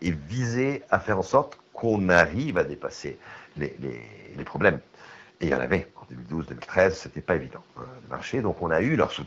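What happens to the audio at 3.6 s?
At 3.6 s the speech carries on intact, with no dropout, glitch or other fault at that moment.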